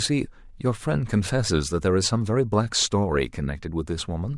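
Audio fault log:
No faults heard anywhere in the speech.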